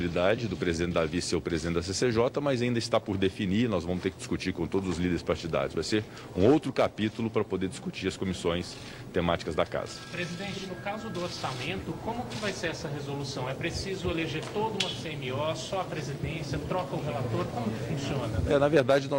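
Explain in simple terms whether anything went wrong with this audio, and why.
Nothing went wrong with this audio, because no fault can be heard anywhere in it.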